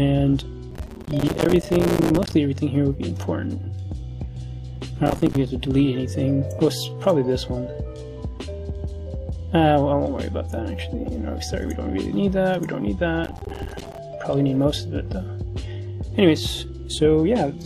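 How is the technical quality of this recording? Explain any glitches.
The recording is marred by processor overload crackle at 0.71–2.33 s, 5.06–5.36 s and 13.24–13.98 s. Dozens of buffers of a few milliseconds each miss their deadlines and drop to silence, so the sound tears into gritty crackle. Unlike a single dropout, it is a dense cluster of tiny gaps.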